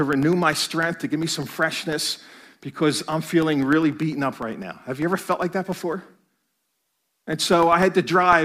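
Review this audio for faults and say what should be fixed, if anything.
Periodic USB or driver dropouts run from 0.13 s to 8.33 s. Ticks recur every 0.1 s, ten per second, about seventy in all. Each tick is a gap of roughly half a millisecond filled with silence. A background task stalls the USB bus or audio driver on a fixed timer, so samples go missing. The ticks are heard only while speech is present. To prevent it, find and stop the recurring task or raise driver priority and buffer size.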